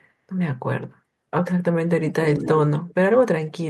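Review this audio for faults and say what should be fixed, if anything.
Speech suppressed in double talk, 1.98–2.46 s (roughly 0.4 s affected, about 30 dB deepest) and 2.68 s to the end (about 40 dB): the sound dips sharply. The likely cause is an echo canceller ducking its own talker while loudspeaker audio plays. Because the drops come while both sides talk, this is not a network dropout. Tune double-talk detection so near-end speech stays unsuppressed.

Echo leak, 2.43–2.48 s: a brief copy of one voice returns 242 ms late, about 15 dB below the speech, likely residual loudspeaker echo. A single discrete repeat sets it apart from room reverberation. Improve echo cancellation or use a headset.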